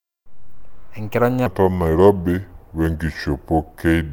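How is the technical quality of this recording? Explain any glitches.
The recording has one fault. A section at the wrong speed runs from 1.46 s to the end: playback was likely clocked too slowly, at about 0.75x, so speech drops roughly five semitones and drags.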